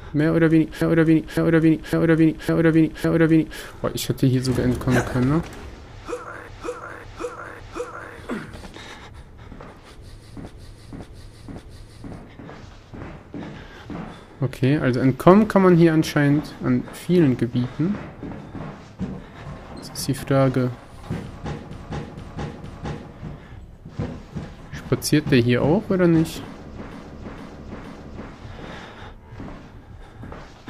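Stutters at 0.82, 6.48, 10.47, 21.71 and 26.91 s loop a 0.56 s block (0.46 s in the last two): repeated frames, the same compressed audio played again.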